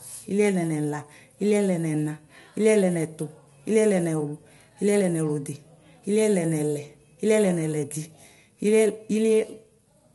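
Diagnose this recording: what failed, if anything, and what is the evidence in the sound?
The failure sits at the codec stage and runs through the whole recording: low-delay AAC compression, most likely AAC-ELD at a bitrate that fits roughly 32 kbps. The speech has a plainly audible rough, grainy texture, with noise filling the gaps between harmonics, and nothing is present above 11.6 kHz. The short coding frames resolve the pitch harmonics poorly, and at this rate too few bits remain to code the spectrum cleanly, so detail smears and the top band is cut away.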